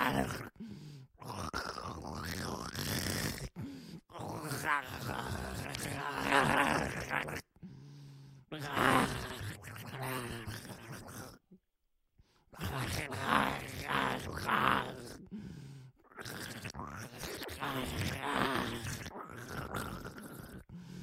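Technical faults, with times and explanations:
13.52–13.72 s: loose connector crackle, an irregular scratchy burst as a poor contact makes and breaks; waveform shows jagged dropouts and spikes, spectrogram broadband vertical streaks.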